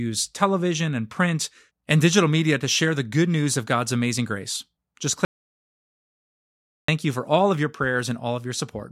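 At 5.25 s the speech drops to dead silence until 6.88 s, about 1.6 s gone. That's an audio dropout to silence, likely from lost input, before "you for all of".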